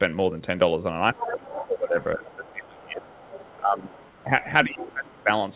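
From 1.12 to 4.3 s the speech dips repeatedly, roughly 2 s in total and by about 20 dB at worst. This is speech suppressed in double talk, likely an echo canceller turning down both talkers at once. A second voice leaks through at 1.17–1.67, 2.02–2.51, 3.03–3.56, 3.95–4.23 and 4.80–4.84 s. That is the other side's voice leaking through, likely loudspeaker echo the canceller missed. It is loudest in the first burst, about 10 dB under the speech, and fainter afterwards, around 20 to 30 dB down. A second suppression, from 4.65 to 5.31 s, cuts deeper, by about 25 dB. The sound stops at 4 kHz throughout, which fits a narrowband G.711 call path.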